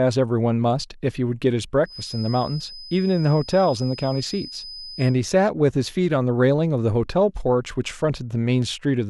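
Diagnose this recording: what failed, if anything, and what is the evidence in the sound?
A thin, slightly wavering 5 kHz whistle sits about 20 dB under the speech from 1.82 to 5.20 s. This is a feedback whistle, likely from a loudspeaker-to-microphone loop held right at the edge of instability.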